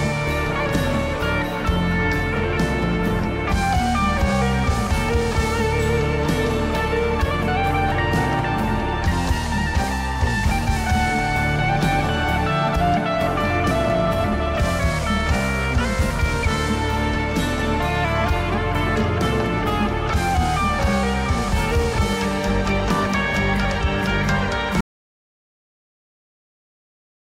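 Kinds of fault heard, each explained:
Audio dropout to silence: at 24.81 s the sound cuts out mid-flow and the last 2.4 s or so to the end is dead digital silence, no room tone at all, which likely means the input was lost while the recorder kept writing zeros.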